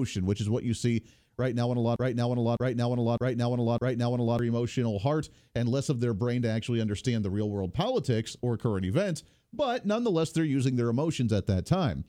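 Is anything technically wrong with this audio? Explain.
Yes. From 1.96 to 4.39 s, after "right now on a", one 0.61 s fragment plays four times back to back, and then "emotional heart and less" follows. This broken-record loop likely comes from a stalled stream resending its last fragment, so the audio that should have played there is lost.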